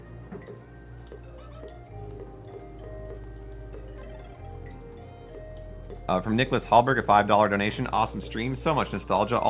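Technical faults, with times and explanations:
Nothing here counts as a fault; the audio simply has the narrow, phone-like band you'd expect from a call, with nothing above 4 kHz, which fits a G.711 A-law codec.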